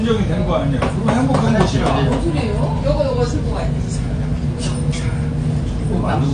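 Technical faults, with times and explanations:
Throughout, likely AAC compression: nothing lies above 9.6 kHz, leaving the sound dull, and coarse quantisation of its frequency lines gives a plainly audible smeared, warbling texture, which fits a low bitrate near 32 kbps. A spectrogram shows a flat, hard ceiling at 9.6 kHz.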